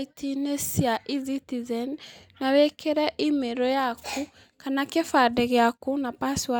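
No technical faults are audible anywhere in the recording.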